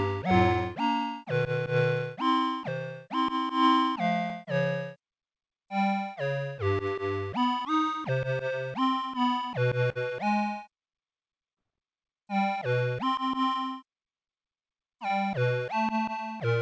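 Short concealed packet loss, twice: about 30 ms of the call arrived too late at 9.92–9.98 s and again at 11.54–11.59 s, and the receiver extended the preceding sound to fill each gap before blending back, leaving brief smeared wobbles through a G.722 path capped at 8 kHz.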